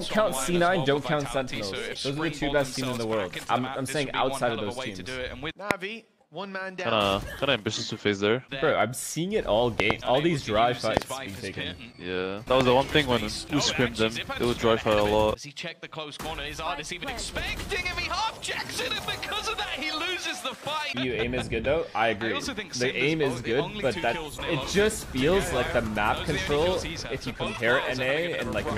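A sharp loud pop jumps out of the sound at 5.71 to 5.73 s, then a quick double pop at 9.80 to 9.93 s, another pair at 10.97 to 11.04 s, and a single pop at 12.61 to 12.63 s. The first three peak at around 25 dB above the signal and the last at around 20 dB, while the sound carries on underneath. The likely cause is a sudden voltage step or pulse from a plug, switch, static discharge or driver glitch.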